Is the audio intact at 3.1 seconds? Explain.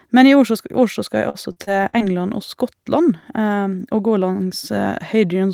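Yes, the speech plays through 3.1 seconds cleanly, with no audible dropout, click, distortion or other fault at that moment.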